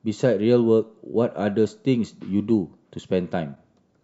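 At 3.55 to 3.57 s, late in the speech, there is a brief corrupt frame decoded: a quick chirpy blip lasting about 20 ms. Flipped bits in the compressed stream left a few consecutive frames with misread codes and wrong gain values, and the decoder played them anyway, scattering energy into frequencies the sound doesn't occupy. On a spectrogram it shows as a short vertical smear or bright patch cutting across the harmonics; the waveform shows a sudden, unnatural jump in envelope.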